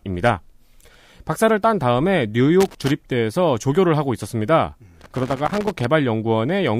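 Irregular scratchy crackle breaks up the speech from 2.61 to 2.92 s and again from 5.01 to 5.85 s: loose connector crackle, a worn contact rapidly making and breaking.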